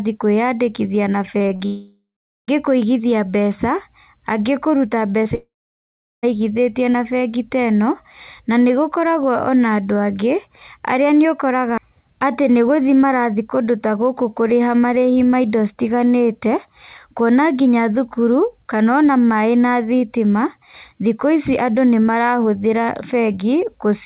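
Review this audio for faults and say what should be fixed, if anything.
Between 1.38 and 1.62 s there's repeated packet loss, which gives a robotic sound. Four holes land close together, the longest about 39 ms and about 100 ms in total. Each one is patched by stretching the last sound, so around 41% of that stretch is synthetic and comes out choppy. A deeper jitter buffer plus forward error correction or redundancy on the link would keep a burst like this from breaking up.

Right after that, from 1.66 to 2.50 s, comes a long network dropout. About 820 ms never gets played, likely because the link stalled. The receiver carries the last sound on as a fading buzz, then there's roughly 430 ms of near silence before the audio picks up again with that piece gone. A second one hits from 5.35 to 6.25 s, losing about 880 ms, with around 740 ms of it just quiet. Fixing the network path itself, or failing over to a steadier connection, is what stops these.

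At 5.24 s there's a short concealed packet loss. About 20 ms didn't arrive in time, and the decoder filled it by extending the preceding sound, which leaves a quick smear just before the second dropout. The same jitter-buffer and redundancy tuning would cover these small ones.

Everything is capped at 4 kHz, which fits G.711 A-law at 64 kbps.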